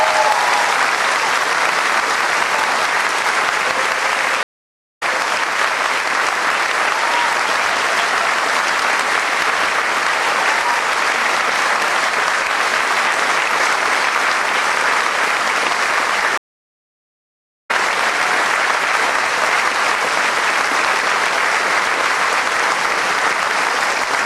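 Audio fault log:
4.43–5.03 s and 16.38–17.71 s, stream reconnect: the connection dropped twice, leaving silences of 0.58 s and 1.29 s. Each time the player re-established the stream and started a fresh decoder mid-stream, so the audio does not pick up where it stopped. It resumes further along the live stream, about a third of a second later after the first gap and roughly a second later after the second, so material is skipped at each break.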